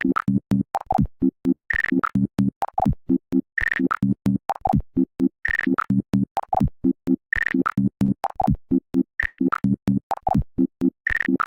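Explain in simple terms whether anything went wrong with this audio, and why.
Two brief smears, at 3.77 to 3.81 s and 8.05 to 8.17 s, are short concealed packet loss: about 20 ms of sound went missing, and the receiver patched the gap by continuing the last sound.

At 9.27 to 9.40 s, a burst of packet loss swaps about 120 ms of real sound for a fading continuation of the previous sound before the audio resumes further on.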